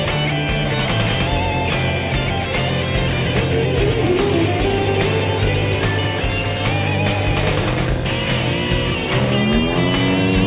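No technical faults can be heard anywhere in the audio. Nothing breaks up, drops out or distorts at any point.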